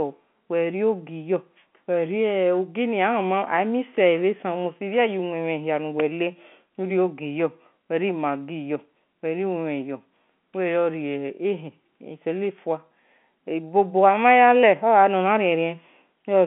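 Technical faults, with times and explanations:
No technical faults can be heard in this speech, so there are no times or explanations to give.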